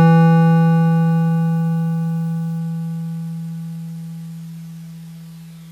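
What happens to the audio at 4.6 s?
At 4.6 s the music is in the middle of an adaptive stream at a lower bitrate, running from 2.59 s to the end. The stream dropped to a leaner version with no gap, so everything above 14.9 kHz is gone.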